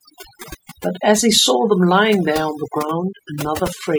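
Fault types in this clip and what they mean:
Overdone noise removal: a noise reducer set far too aggressively strips every band near its noise estimate, so quiet speech detail goes too. Throughout, the background drops and breaks up into twinkling specks; a spectrogram shows scattered isolated dots and ragged, hollowed harmonics.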